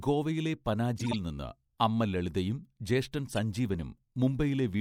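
Speech, with two bursts of corrupt frames decoded. From 0.98 to 1.15 s, several damaged compressed frames play anyway, giving a chirpy noise burst. A shorter, quieter blip follows from 3.28 to 3.38 s. Misread gains and codes put energy at wrong frequencies.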